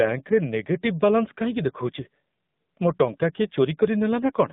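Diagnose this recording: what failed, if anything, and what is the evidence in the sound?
Thin, boxed-in speech with a buzzy, synthetic edge throughout, and nothing below about 150 Hz or above 3.7 kHz. Codec stage: the AMR narrowband mobile codec, an 8 kHz vocal-tract model whose plainly audible roughness points to a low mode near 7.4 kbps.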